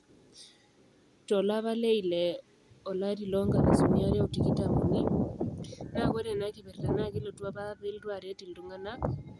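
Nothing in the speech stood out as a technical fault on listening.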